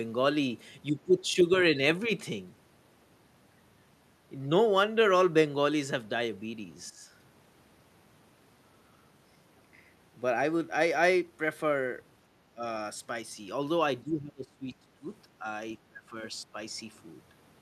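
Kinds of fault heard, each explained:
Speech suppressed in double talk: The speech dips by up to about 25 dB seven times. The most likely cause is an echo canceller muting it while both sides talk.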